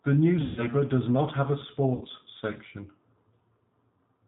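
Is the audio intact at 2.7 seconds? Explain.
No. The whole clip passed through G.729 coding, which fits an 8 kbit/s VoIP link rebuilding speech from a vocal tract filter and sparse pulses, so at 2.7 seconds it sounds band-limited below 4 kHz, rough and synthetic.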